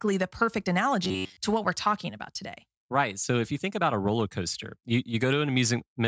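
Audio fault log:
1.05 to 1.37 s, robotic sound from repeated short buffers: the speech turns into a rigid, metallic buzz at about 94 Hz that follows the original only roughly. The likely cause is new audio arriving too seldom, so the software fills the gaps by looping the last short stretch it received while the real audio is skipped. The buzz rate points to a repeated piece about 10.7 ms long, and around 70 percent of this stretch is made of such repeats.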